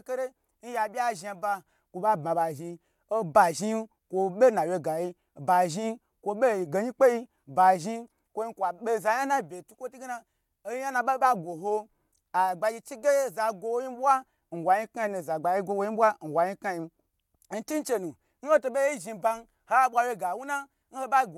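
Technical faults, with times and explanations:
No technical faults are audible in the speech.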